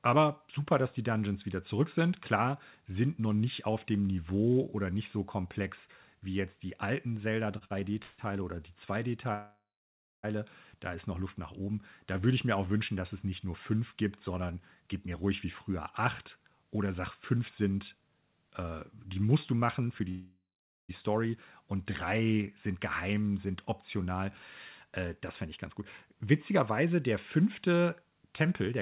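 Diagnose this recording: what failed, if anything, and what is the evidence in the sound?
The fault is repeated stalls (stutter) at the network and jitter-buffer stage, between 7.58 and 8.20 s. The sound halts four times in that span. Each gap is bridged by a continuation of the preceding sound, the longest about 149 ms, with roughly 239 ms of fill in total, about 39% of the span. Packets were arriving more slowly than playout, so the buffer kept draining. Nothing is lost, but the passage drags and catches.

Two call audio freezes occur, at 9.34 to 10.25 s and at 20.09 to 20.91 s. In each, the last sound is held as a decaying buzz or hiss and then drops to silence, for about 600 ms in the first and about 450 ms in the second. The audio then resumes where it left off, inserting about 894 ms and 793 ms of delay. The likely cause is packets held up in the network until the jitter buffer ran dry.

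A jitter buffer speed-up runs from 14.40 to 15.71 s and again from 16.26 to 20.01 s. Playback runs at about 109% of normal speed with pitch unchanged, so the delivery sounds hurried. This is the buffer shedding its excess depth. It does this by cutting short pitch-period segments repeatedly. Roughly 150 ms is trimmed in the first stretch and around 300 ms in the second. The band ending at 4 kHz points to G.711 A-law on the call path.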